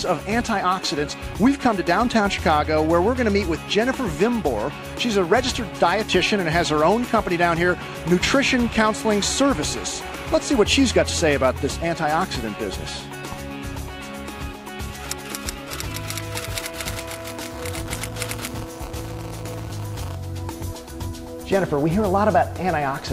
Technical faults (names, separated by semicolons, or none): buffer tearing